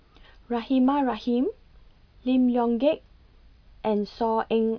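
No technical faults are audible.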